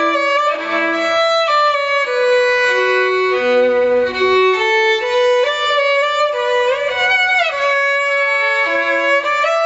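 Input gain set far too high for the microphone, with a fast limiter or compressor clamping it back down on every loud sound, is the likely source of the gain pumping that runs through the whole clip. The level swings by around 15 dB. Loud and soft passages end up squeezed close together in level, and the sound feels squashed. The audio stops at 8 kHz, as the call path's bandwidth sets it.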